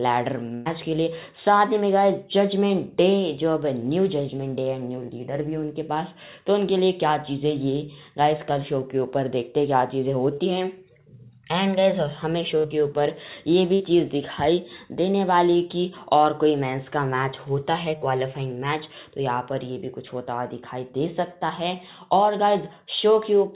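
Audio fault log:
0.54–0.68 s, 12.58–12.66 s and 13.74–13.82 s: burst of packet loss. About 120, 60 and 60 ms of audio never arrive. The receiver stretches the last sound and fades it, giving a held buzz or hiss. On a spectrogram, frozen horizontal bands fade out before the real signal resumes slightly further on.
10.34 s and 18.0 s: short concealed packet loss. Roughly 40 ms gaps are filled by continuing the preceding sound and blending back, heard as a brief smear or wobble. The spectrogram shows a blurred sliver below the 4 kHz ceiling of the G.711 path.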